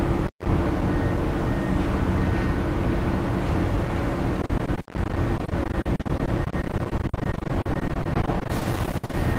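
From the start, every loud moment carries a harsh, gritty fuzz. This is hard clipping: the signal is driven about 9 dB beyond what a stage can pass, so roughly a tenth of the samples have their peaks sliced flat, spraying high harmonics across the spectrum.

From 4.41 s to 9.15 s the sound turns choppy, with a robotic stutter. This is repeated packet loss: dozens of short holes, the longest 60 ms, are each patched by stretching the preceding sound, so over a quarter of this span is concealed rather than real.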